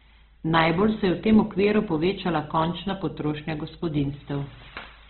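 Across the whole clip the speech is narrowband, with nothing above 4.4 kHz and a heavily grainy, rough texture, likely from Opus compression at a very low bitrate. From 0.14 s to 5.04 s, word clock ticks recur about every tenth of a second, roughly fifty sharp ticks. Each marks one sample slipping between unlocked clocks that are a couple of hundred ppm apart.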